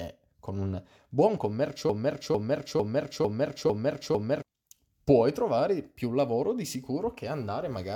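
From 1.9 s to 4.42 s, right after "con un buon", a 450 ms slice of speech repeats exactly six times, back to back, before resuming at "puoi trovare più lavoro". This broken-record loop likely comes from a stalled player or stream resending its last fragment, so the intervening audio is lost.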